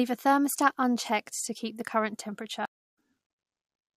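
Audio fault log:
2.65–2.96 s, stream reconnect: right after "to keep the current" the speech drops out for about 240 ms, then picks up roughly a fifth of a second further on. The connection broke, and the player reconnected with a fresh decoder while the live stream kept moving.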